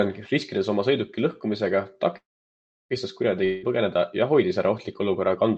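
At 2.17 s, right after "riskides oma sõiduki lõhkumisega", the audio stalls in a call audio freeze, likely from packets held up until the jitter buffer ran dry. A brief fading continuation of the last sound gives way to about 0.68 s of silence, and speech resumes at 2.93 s with nothing skipped, just delayed by about 0.73 s. On a waveform this is a flat gap; the spectrogram shows a smeared tail, then a blank column.

From 3.44 to 3.65 s a long network dropout likely cost about 0.18 s of audio, filled throughout with a buzzy, decaying repeat of the preceding sound rather than silence. Speech picks up again at "põgeneda ja hoidis ära" with the lost piece gone, so the words jump ahead. The spectrogram shows blurred, repeating bands fading in energy, and energy stays below about 8 kHz, as across the rest of this Opus call audio.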